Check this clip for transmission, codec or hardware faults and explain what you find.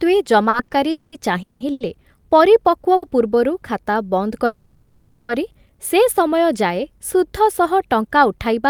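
The clip has three related network timing faults. In each, the speech is held up and then resumes rather than losing content.

From 0.49 to 1.82 s, the speech stutters and drags through five brief stalls, up to 180 ms each. This is repeated stalls (stutter): late packets kept emptying the jitter buffer, and about 360 ms was filled in.

From 0.91 to 1.14 s, inside that stretch, the sound hangs as a fading buzz or hiss for 210 ms before continuing. From 4.46 to 5.31 s, it does the same for 830 ms, never reaching silence. Both are a call audio freeze, likely from packets held up in transit until the buffer ran dry.

Around 2.96 to 3.04 s, one sound is held about 60 ms too long, with a slight buzz or dip. This is a short stall from a late packet: the receiver stretched the last sound until the packet arrived.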